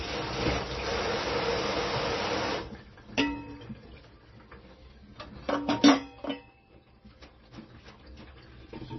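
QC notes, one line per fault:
throughout, MP3 compression: the sound is dull and watery, with a swirling, metallic chirp on hiss-like and bright detail and softened, smeared attacks. Nothing sits above about 5.9 kHz, a hard treble ceiling rather than a gentle roll-off. The damage is heavy and points to a low-bitrate MP3 of around 24 kbps. This is the likely cause: with so few bits, the encoder cuts the top band and drops weak spectral lines that flicker between frames, producing that swirl.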